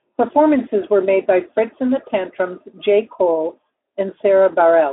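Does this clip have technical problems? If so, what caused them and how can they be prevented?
No, this speech clip has no technical problems that need fixing. It passes through a Speex codec at a setting that sounds like about 15 kbps, with the sound confined to a telephone-style band of roughly 300 Hz to 3.5 kHz and nothing audible above 3.9 kHz.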